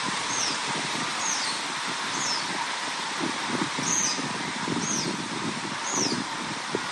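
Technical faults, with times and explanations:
Throughout, MP3 compression: nothing sounds above 13.1 kHz, and a plainly audible watery swirl with smeared attacks runs through the audio. This likely comes from an MP3 encoder starved of bits, fitting about 48 kbps, which flickers weak frequency lines on and off. A plain low-pass filter would not swirl.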